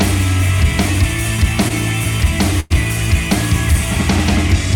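A short stall from a late packet at 1.68 to 1.72 s holds the last sound for about 17 ms, seen as a briefly smeared, horizontally stretched patch on a spectrogram. A call audio freeze from 2.60 to 2.72 s, likely caused by packets held up in transit, extends the sound about 100 ms as a fading buzz or hiss, with repeated waveform cycles. In both places the audio then resumes where it stopped, with nothing missing.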